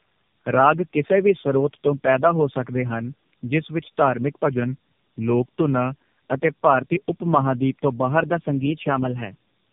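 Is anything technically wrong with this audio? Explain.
Yes. The speech carries two kinds of fault: tandem speech coding across the whole clip, and two drift correction steps.

Tandem speech coding runs from start to finish. The call passed through three AMR-NB stages with G.711 links between them, so the audio was decoded and coded again at each border. Each later AMR-NB stage re-quantised the errors left by the ones before. Nothing is heard above 3.6 kHz, and the result is muffled, rough and warbly. A single low-rate codec would lose the same band but would not pile up this grainy, compounded roughness.

Drift correction steps occur twice. From 4.46 to 6.02 s, after "ਹਨ ਜਿਸ ਵਿੱਚ ਧਾਰਮਿਕ" and before "ਅਤੇ ਭਾਰਤੀ ਉਪ", playback slows by 6% and the pitch drops about 107 cents, roughly a semitone. Then it snaps back. From 8.30 s to the end, after "ਤੋਂ ਬਾਹਰ", the speed rises by 6% and the pitch rises about 101 cents. 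The likely cause is clock-matching software changing the playback rate in one step to refill or drain its buffer. Speed and pitch move together and abruptly, which separates this from tape wow, where they drift gradually. It also differs from a pitch-shift effect, which leaves timing unchanged.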